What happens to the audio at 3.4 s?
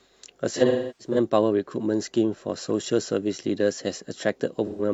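At 3.4 s the speech carries on cleanly, with no dropout, click, distortion or other fault at that point.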